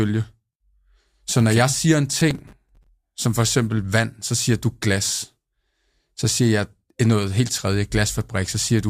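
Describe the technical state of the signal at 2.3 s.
At 2.3 s the signal is inside a burst of processor overload crackle running from 2.13 to 2.89 s, between "okay jeg siger en" and "som for". The processor is missing its buffer deadlines repeatedly, and each missed slot is filled with a stale fragment of earlier audio, hard-edged at both ends. The spacing points to buffers of roughly 5 ms, with about twenty misses across the stretch, producing a gritty, tearing crackle over the speech.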